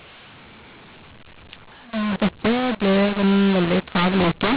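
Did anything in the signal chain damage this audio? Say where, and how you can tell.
Yes, at the codec stage: audio encoded as G.711 A-law is being decoded as mu-law, a mu-law and A-law mix-up running through the whole clip. The misread companding scrambles levels, making the speech harsh and distorted, with quiet samples lifted so pauses fill with noise.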